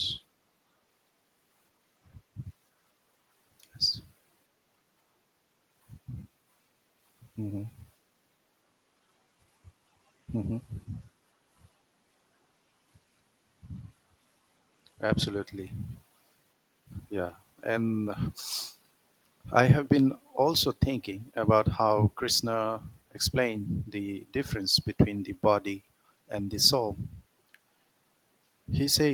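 No technical faults can be heard anywhere in this speech recording; the signal stays continuous and intact throughout.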